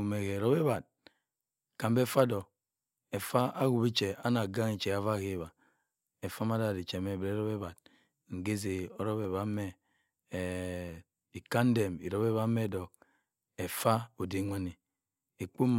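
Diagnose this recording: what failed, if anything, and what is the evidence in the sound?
Four single sharp clicks land in the speech at 2.41, 3.40, 9.24 and 10.89 s, each a thin vertical line in the spectrum. The likely cause is dropped samples at the driver or buffer stage: a fraction of a millisecond goes missing, so the waveform jumps straight to a later value.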